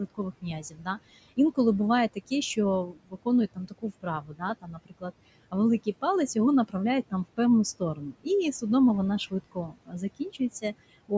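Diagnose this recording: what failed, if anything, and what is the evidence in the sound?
The noise suppressor in the call processing stage is lowering every band it judges to be steady noise, by about 21 dB, frame by frame. The room noise, about 17 dB below the speech, sinks in the gaps and rises under speech throughout.

The same suppressor also mistakes parts of the speech for noise: speech is cut by the noise suppressor at 0.1–0.98 s, 2.14–5.11 s, 7.8–8.27 s and 9.3–10.64 s, with dips of about 20 to 22 dB. Soft consonants and word endings there sound swallowed, roughly a second's worth in the longest stretch.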